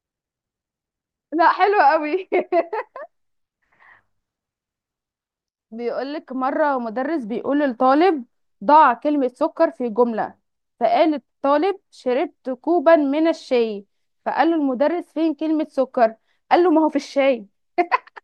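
No technical faults are audible.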